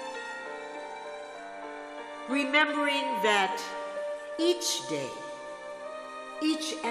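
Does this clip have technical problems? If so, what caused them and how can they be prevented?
Yes, there's one brief glitch at about 4.38 s, from damaged data in a compressed stream. The decoder hit corrupted bytes, lost sync, and skipped ahead to the next frame header, so the sound briefly breaks up. To prevent it, check file integrity with checksums and use error-resilient transport or storage.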